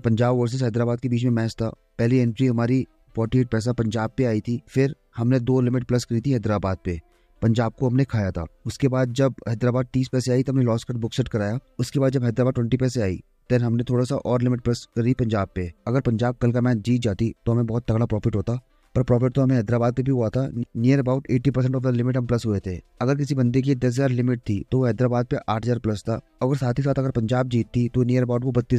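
Nothing is technically wrong with this audio clip, so there are no times or causes to give.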